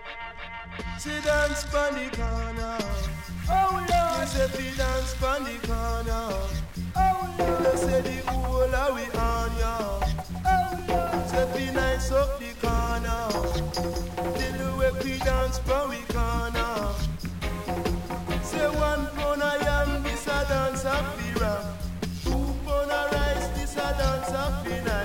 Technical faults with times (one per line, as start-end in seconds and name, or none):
2.90-25.04 stuck bit